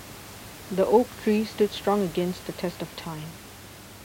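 No technical faults occur anywhere in the recording; the background heard under the speech is the room's own noise, about 18 dB below it.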